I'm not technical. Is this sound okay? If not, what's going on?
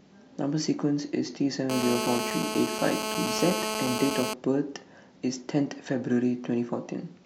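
No, there's GSM phone buzz from 1.70 to 4.34 s: a harsh, raspy buzz over the speech, steady throughout. A nearby mobile on a call pulses its radio about 217 times a second, and the audio circuitry picks those pulses up as sound.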